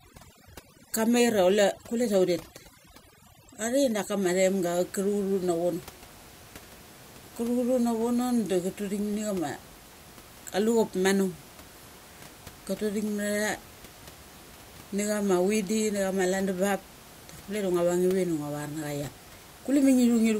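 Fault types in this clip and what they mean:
Overdone noise removal, 0 to 4.23 s: a noise reduction stage is clamping down too hard, so any frequency band that sits near its estimate of the background gets pushed almost to nothing, and the softer parts of the speech are cut along with it. The room noise, which otherwise sits about 23 dB below the speech, drops and breaks up into twinkling specks.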